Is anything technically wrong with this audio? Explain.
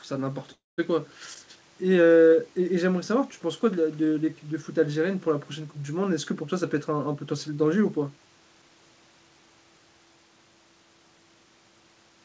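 Yes, there are two faults. From 0.52 to 0.80 s there is a call audio freeze. Packets were likely held up and the jitter buffer ran dry, so the receiver stretched the last sound into a fading buzz that falls silent for about 180 ms. The sound then resumes where it stopped, with nothing lost but the speech about 260 ms late.

From 6.62 to 8.70 s there is a jitter buffer speed-up. Having built up excess delay, the buffer trimmed short pitch-period slices repeatedly, removing about 0.3 s in total. The speech plays at about 112% speed with unchanged pitch and sounds hurried. The band ends at 8 kHz, which fits a G.722 call path.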